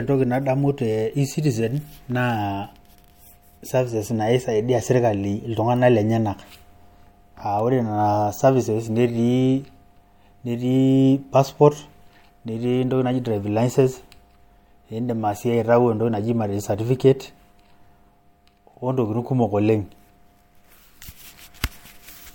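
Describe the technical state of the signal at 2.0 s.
At 2.0 s the signal is intact, with no audible fault at that moment.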